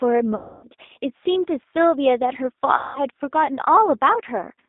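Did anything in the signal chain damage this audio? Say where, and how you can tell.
Yes. G.729 codec throughout, at the codec stage: speech sounds rough and synthetic, limited to 250 Hz to 3.7 kHz, which points to 8 kbit/s CELP coding from pulses and filters.

VoIP packet loss concealed by the speech codec, network stage, at 0.35 to 0.68 s and 2.77 to 3.00 s: the decoder stretches its last frames into a fading buzz or coloured noise, covering gaps of about 280 ms and 180 ms.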